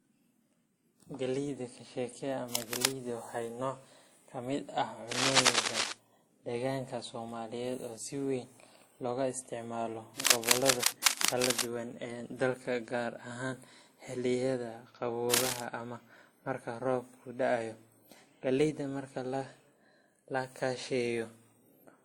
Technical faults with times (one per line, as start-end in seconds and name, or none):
0.00-22.04 transcoding between lossy codecs
2.51-2.86 cable scratch noise
5.11-5.93 cable scratch noise
10.17-11.71 cable scratch noise
15.33-15.64 cable scratch noise